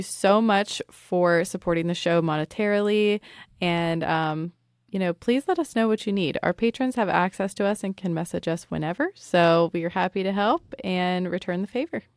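No technical faults can be heard in this recording.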